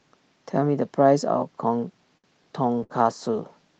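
At 2.17 s there's a short stall from a late packet. The jitter buffer ran dry, so the receiver stretched the last bit of speech for about 63 ms until the packet showed up at 2.27 s. Nothing's lost, but that sound hangs a touch long with a faint buzz or dip.

From 2.55 s to the end you get a call bitrate drop. The bandwidth estimate fell, and the Opus encoder had to code much more coarsely, which fits a cut from about 40 kbps to about 18 kbps. It sits at the low rate for roughly 1.2 s, and the speech turns rough and watery.

Inside that stretch, from 2.84 to 2.92 s, there's a burst of packet loss. The receiver carried the last sound forward for about 57 ms and faded it down, then jumped ahead with around 60 ms of speech gone. The call path's 8 kHz bandwidth limit keeps everything a bit dull on top.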